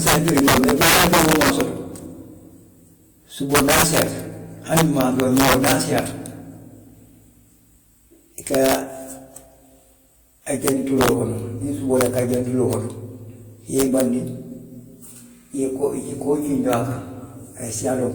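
Integer overflow runs through the whole clip: the speech is pushed about 8 dB past full scale, and instead of being limited, the loudest peaks, around one percent of samples, wrap to the opposite sign. Each one is a sharp, violent crack, harsher than ordinary clipping.

Transcoding between lossy codecs also runs throughout: two different sets of compression artefacts sit on top of each other, with nothing above 20.2 kHz. The cause is likely a WMA encode near 96 kbit/s followed by Opus at 32 kbit/s.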